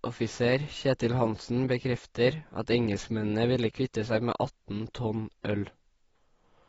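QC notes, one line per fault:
Throughout, AAC compression: the speech is dull and smeared, with nothing above 7.7 kHz and a warbling, fizzy texture on sibilants and held sounds, which a plain low-pass filter would not add. The damage is likely from AAC-LC at about 24 kbps.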